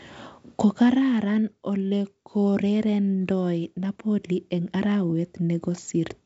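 Nothing stood out on listening to this wideband telephone speech, whose content stops a little below 7.7 kHz as the G.722 coding at 64 kbit/s allows.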